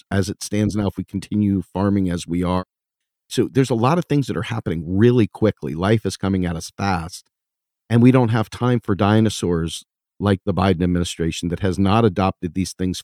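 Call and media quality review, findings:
No audible faults found in the speech recording.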